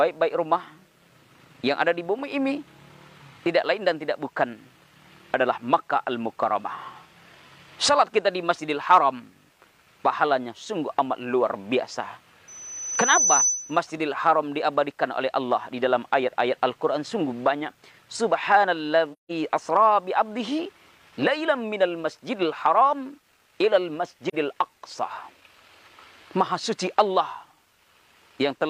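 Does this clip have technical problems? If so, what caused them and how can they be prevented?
Yes. From 12.48 to 13.80 s a piercing 6 kHz tone swells over roughly 0.7 s until it sits around 5 dB above the rest of the sound. This is loudspeaker feedback squeal. The microphone picked up its own loudspeaker, and at 6 kHz the loop gain passed one, so the tone fed itself. To prevent it, lower the gain, move the microphone away from the speaker, or notch 6 kHz.

The sound briefly drops to silence with soft edges, from 19.12 to 19.31 s and again from 24.29 to 24.35 s. This is AAC frame loss with muting. Lost frames were decoded as zero spectrum and faded out and back in by the overlapping windows. The gaps of about 171 ms and 43 ms fit four lost frames and one lost frame. To prevent it, use a more reliable transport or add error protection and concealment for the stream.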